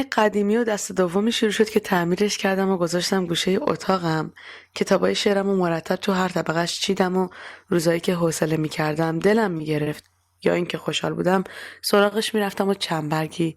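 Speech clip with three short stalls from a late packet, at 9.57, 9.83 and 12.08 s: the jitter buffer ran dry, so sound stretches 20–30 ms, nothing lost.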